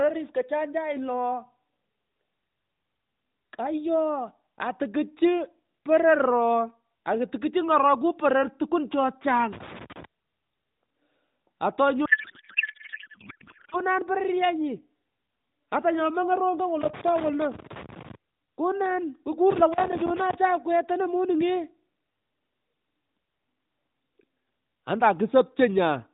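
Loose connector crackle first appears from 9.53 to 10.05 s, just after "poror tukuun che chang." A worn contact makes and breaks, chopping the signal into scratchy bursts. These show as ragged vertical spikes on the waveform and broadband smears on the spectrogram.

From 12.06 to 13.76 s comes a codec payload misread. The sound becomes garbled, warbling noise that barely tracks the speech, which points to AMR packed octet-aligned but decoded as bandwidth-efficient. On the spectrogram the speech harmonics give way to a disordered smear, still capped at 4 kHz by the narrowband AMR path, whose coding damage is light.

The crackle returns from 16.81 to 18.15 s after "mongoy rongo," and again from 19.50 to 20.35 s, with the same irregular spikes and broadband flecks.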